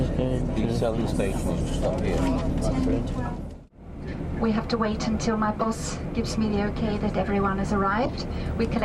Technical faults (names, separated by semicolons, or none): corrupt frame decoded